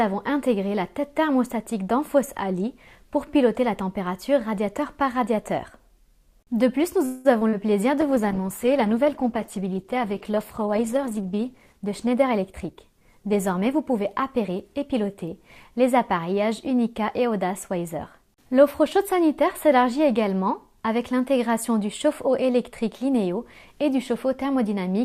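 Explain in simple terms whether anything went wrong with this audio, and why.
Several things went wrong, all clustered in the middle. At 7.05 to 7.27 s there is a call audio freeze: the sound stalls into a fading buzz for a fifth of a second, likely because delayed packets emptied the jitter buffer, then resumes where it stopped.

Short concealed packet loss follows at 7.39 and 7.49 s. About 20 and 40 ms never arrived, and the receiver patched each gap, causing brief smears.

A call bitrate drop runs from 8.01 to 15.78 s. The encoder had far fewer bits, so the sound turns rough and muffled, worst for about three seconds.

From 11.73 to 15.15 s a jitter buffer speed-up plays the sound 5% faster at unchanged pitch, trimming roughly a fifth of a second of built-up delay.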